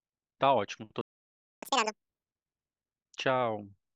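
At 1.01 s the speech cuts out into a playback stall, silent for about 0.61 s until 1.63 s, likely because the player ran short of buffered data or its thread was held up. The waveform shows a flat line there and the spectrogram a blank gap across all frequencies.

From 1.63 s to 2.24 s comes catch-up at higher speed: the backlog plays at 2.0x, so the speech rushes and its pitch rises by roughly ten semitones. On a spectrogram the harmonics sit visibly higher and closer in time, then drop back to normal.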